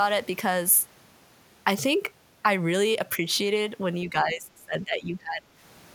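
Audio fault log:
4.09–5.48 s, speech suppressed in double talk: the level sags hard, dropping about 25 dB at its deepest and pulling down around a second of audio in all. That's likely the echo canceller catching both ends talking at once and ducking this side along with the echo.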